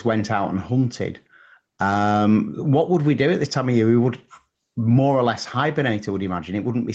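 Gain pumping runs through the whole speech recording, with the level swinging by around 10 dB. Loud and quiet passages sit unnaturally close together, giving a squashed quality. The likely cause is input gain set far too high, with a fast limiter or compressor clamping down on each peak. Over the call path, nothing is heard above 8 kHz, consistent with a low-bitrate Opus stream.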